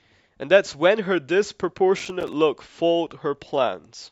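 From 2.00 to 2.33 s, the speech breaks into a burst of processor overload crackle. The processor missed around ten buffer deadlines, each gap fitting buffers of roughly 5 ms. Every miss drops in silence with hard edges. Together they sound like gritty tearing.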